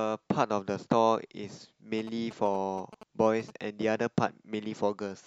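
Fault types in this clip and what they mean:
GSM signalling bursts: a nearby 2G phone exchanging short control bursts with the network gets rectified by the audio circuit, giving a galloping ticking buzz at about 217 Hz under the speech from 1.99 to 3.50 s, roughly 15 dB down. On a spectrogram it appears as vertical stripes with a 217 Hz harmonic comb. The waveform shows clusters of sharp spikes.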